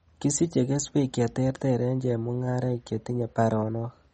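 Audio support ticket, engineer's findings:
Speech band-limited throughout, nothing above 8.3 kHz, plainly audible watery swirl. Likely MP3 compression, fits a 32 kbps rate: encoder cuts treble, weak lines toggle frame to frame. Plain low-pass filter gives dullness without swirl.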